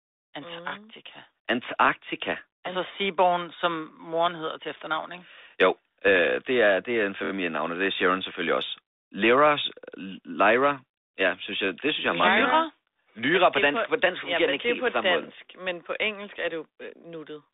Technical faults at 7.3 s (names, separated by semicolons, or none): repeated buffer